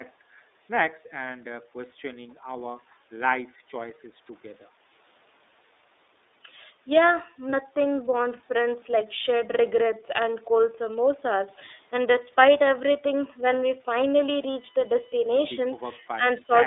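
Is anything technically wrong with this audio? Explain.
Yes, there are three problems.

The whole clip carries iLBC codec damage. The speech is confined to roughly 300 Hz to 3.7 kHz and sounds plainly rough and synthetic. That fits iLBC's 13.33 kbps mode with 30 ms frames, where each frame's excitation is coded independently. Simple band-limiting would sound muffled but natural, without this grainy, artificial texture.

From 7.5 to 7.54 s, a lost iLBC frame, about 30 ms of audio, is covered by the decoder repeating the last pitch cycle mixed with noise. It sounds like a brief buzzy held vowel, not a silent gap or click. Because iLBC frames stand alone, clean speech resumes immediately afterwards.

At 16.17 to 16.23 s and again at 16.41 to 16.51 s, the speech dips by roughly 10 dB in short pieces. This is likely speech suppressed in double talk: the echo canceller, unable to separate the talker from the loudspeaker echo, attenuates both. 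Unlike a lost frame, the sound is turned down rather than replaced by a synthetic buzz.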